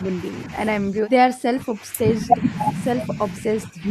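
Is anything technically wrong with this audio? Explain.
Yes, the speech is intermittently pushed down, at 0 to 0.33 s (a slight dip of about 5 dB), 0.8 to 2.44 s (drops of up to around 20 dB through most of that stretch) and 3.66 to 3.86 s (about 15 dB). This is speech suppressed in double talk, likely caused by an echo canceller that mistook overlapping talk for loudspeaker echo and attenuated it. Unlike packet-loss dropouts, the level is turned down rather than lost to missing data.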